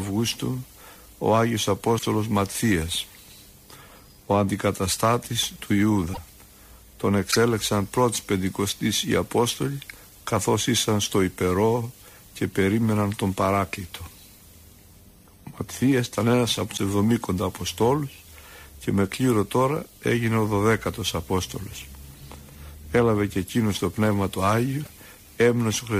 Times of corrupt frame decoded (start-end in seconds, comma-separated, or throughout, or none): none